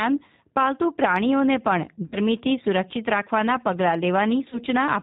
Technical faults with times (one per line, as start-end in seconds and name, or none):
0.00-5.02 G.729 codec
2.06-2.17 VoIP packet loss concealed by the speech codec
4.50-4.59 VoIP packet loss concealed by the speech codec